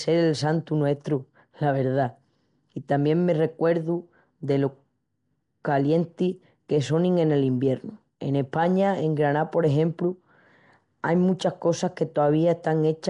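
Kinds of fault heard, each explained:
Nellymoser compression: rough, hissy halo and smeared underwater quality throughout, likely from Nellymoser Asao's fixed two-bit blocks noise-filling weak bands; nothing above 10.6 kHz.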